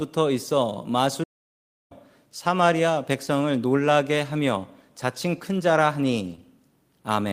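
A speech recording in which the sound cuts out to silence from 1.23 to 1.92 s, about 0.67 s of dead air mid-flow before it resumes. This playback stall is likely the player running short of data or its output thread being held up until it recovered. Around 6.27 to 6.33 s the speech turns briefly rougher and grainier without any gap. That is a lost packet rebuilt from error correction: roughly 40 ms, consistent with two lost packets, was decoded from the low-bitrate backup copies carried in the following packets. Just after, at 6.35 to 6.40 s, a short smear appears where about 20 ms of audio never arrived. This short concealed packet loss was patched by the decoder extending the preceding sound and blending back into the real signal.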